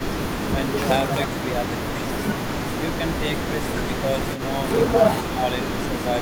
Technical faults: speech suppressed in double talk

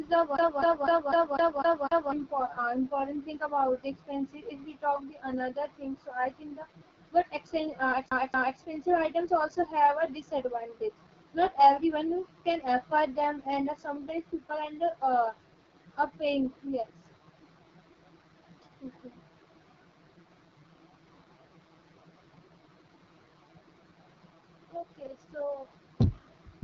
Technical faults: AMR wideband (HD Voice) codec; CD stuck on one turn

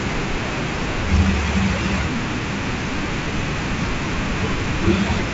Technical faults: none

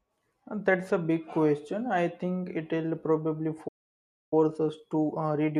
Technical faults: playback stall; time-compressed catch-up

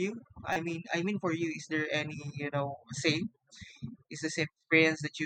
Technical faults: corrupt frame decoded

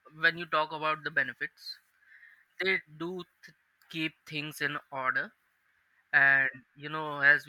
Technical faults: none

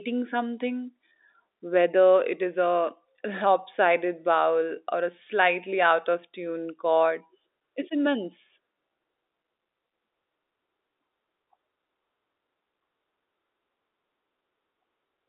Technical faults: none

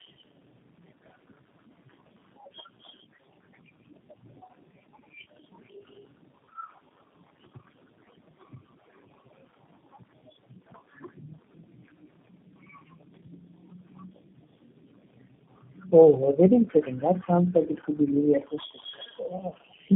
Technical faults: tandem speech coding

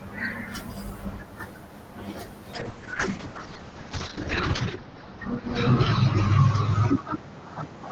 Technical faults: call bitrate drop

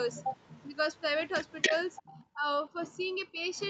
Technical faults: echo leak; speech suppressed in double talk

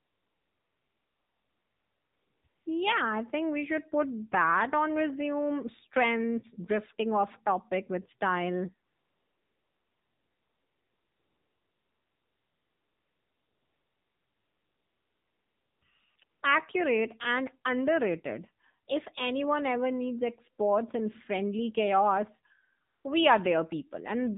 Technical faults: AMR narrowband mobile codec; AMR comfort noise

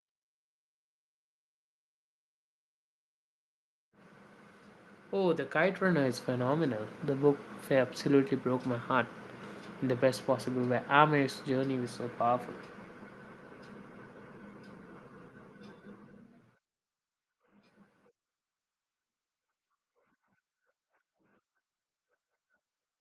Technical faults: microphone volume stepped up

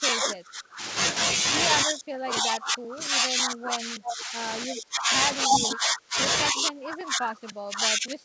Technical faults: speech suppressed in double talk; echo leak

